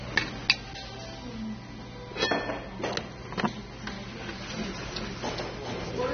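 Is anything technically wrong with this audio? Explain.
Yes, there are two faults.

AAC compression is audible throughout. Nothing is present above 6.3 kHz, so the top of the spectrum is gone and the sound is dull. The encoder discards frequency lines its hearing model treats as expendable and lowers the bandwidth to save bits. That leaves a smeared, warbling, fizzy texture on sustained and noisy parts. The damage is plainly audible, and the likely cause is AAC-LC at a low bitrate of about 24 kbps.

A doubled audio track starts at 3.89 s and runs to the end. A second full-band copy follows roughly 0.4 s behind the original, about 5 dB quieter. Because it is an exact duplicate, it carries no decay or room colour. It enters abruptly, unlike a natural echo, and makes every event sound twice. This is likely the same signal captured again through a slower path, or two out-of-step copies left together in an edit.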